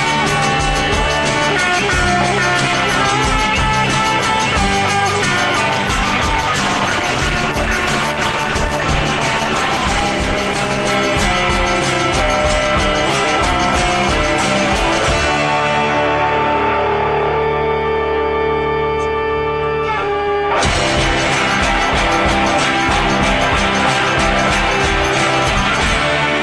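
From 5.69 to 12.43 s a call bitrate drop, consistent with 48 falling to 14 kbps, codes the sound coarsely; the spectrogram loses its upper band until recovery.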